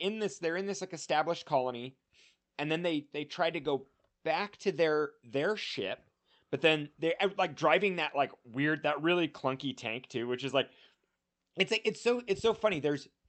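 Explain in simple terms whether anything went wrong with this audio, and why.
Nothing went wrong that I could hear: the speech came across a normal call connection, and listening closely, nothing stood out as a problem.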